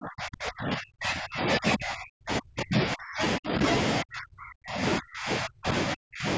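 A speech clip whose voice repeatedly sinks to near silence, dropping by about 40 dB from 0.0 to 3.6 s, 4.01 to 4.82 s, 4.98 to 5.74 s and 5.93 to 6.26 s, likely speech suppressed in double talk by the call's echo canceller.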